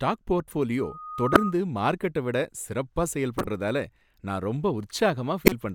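From 0.78 to 1.56 s a loudspeaker feedback squeal rises out of the speech. It is a single steady tone near 1.2 kHz that swells over about half a second until it sits roughly 5 dB above the speech, then stops just before "மார்க்கெட்ட விட சிறப்பா". The microphone was re-amplifying its own loudspeaker, and at that one frequency the loop gain passed unity. The slow build and the fixed pitch set it apart from a codec glitch, which appears fully formed and has no steady tone.

Inside that squeal, at 1.33 to 1.37 s, comes the first corrupt frame decoded. It is a sudden chirpy blip peaking near -5 dBFS. Its length points to a couple of damaged compressed frames that the decoder played as they were, so misread gains and codes put energy at the wrong frequencies. Two more follow. The one at 3.38 to 3.48 s, after "மார்க்கெட்ட விட சிறப்பா", peaks near -10 dBFS and spans a few frames. The one at 5.46 to 5.52 s peaks near -5 dBFS. 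Each starts and stops abruptly, with no build-up or fixed pitch.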